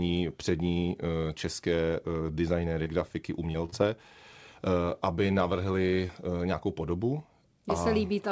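Short concealed packet loss occurs at 2.84 s, 3.52 s, 3.66 s, 3.70 s and 6.08 s, each stretch lasting about 40 ms or less. Each time, roughly 20 ms of the call arrived too late for the decoder, and the receiver improvised by extending the preceding sound before crossfading back into real audio. Right after "designéry grafiky" and "aby navrhli" this comes through as a quick smear or wobble, heard over a call path whose band stops at 8 kHz.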